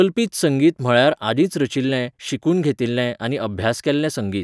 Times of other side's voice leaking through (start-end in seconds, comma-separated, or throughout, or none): none